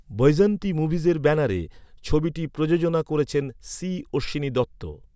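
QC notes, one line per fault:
No technical faults are audible anywhere in this speech recording, and the signal holds steady with nothing to flag.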